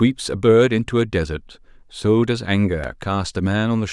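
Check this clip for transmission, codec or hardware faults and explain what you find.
One fault is present in this speech clip. At 2.84 s there is a block of digital silence about 5.3 ms long, which fits a 128-sample buffer the program failed to fill in time. The signal drops straight to silence and back with no fade, and at this length the gap is heard as a tick or dip rather than as silence.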